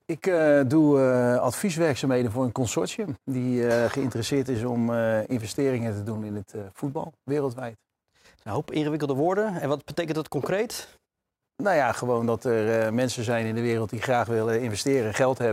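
No technical faults can be heard anywhere in the audio, so there is nothing to describe in time order.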